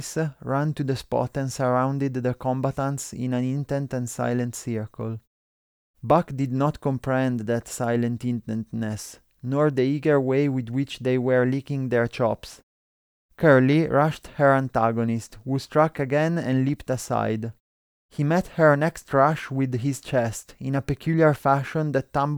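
Nothing in this speech recording stands out as a technical problem, so there's nothing to flag here.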